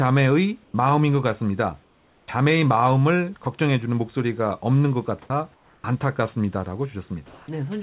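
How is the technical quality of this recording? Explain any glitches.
The speech is band-limited, with nothing above 4 kHz, as fits a G.711 call path, and has audible gaps where the background or the speech is replaced.

Comfort noise in place of the background: at 0.64–0.74 s, 1.84–2.28 s and 5.54–5.84 s, the room's textured hiss turns into a flat, featureless noise about 10, 4 and 8 dB quieter. The likely cause is discontinuous transmission, with the receiver synthesising noise during pauses.

Sound dropped by the voice detector: at 3.44 s, 5.22–5.30 s and 7.26–7.48 s, brief bits of speech vanish into steady noise. This is likely because the sender's detector mistook quiet speech for background.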